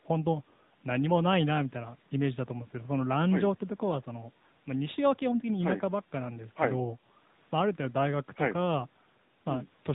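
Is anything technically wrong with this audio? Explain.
Yes, the whole clip has been through an AMR narrowband mobile codec. The speech is cut off sharply at 4 kHz because the codec samples at 8 kHz, and the voice is rebuilt from a vocal-tract model fed with 2 to 10 pulses in each 5 ms. That gives it the dull, boxy phone-call sound that's plainly audible here, which fits one of AMR-NB's higher modes, somewhere around 10 kbps.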